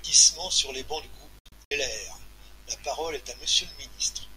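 A digital broadcast dropout breaks up this speech clip from 1.39 to 1.72 s. The receiver muted wherever frames failed, fading out within about 3 ms, leaving short holes totalling 160 ms (longest 64 ms), which points to several lost frames.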